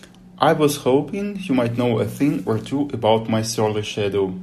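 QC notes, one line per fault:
2.45 s, AAC frame loss with concealment: after "might know a thing", a smeared, noisy blip where the decoder refilled one missing 10 ms frame from the previous spectrum.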